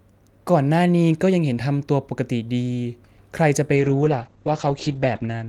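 Speech with a call bitrate drop at 3.76 s: encoding falls from 48 to 9 kbps, so it turns rough and muffled, and the spectrogram goes blank above 8 kHz.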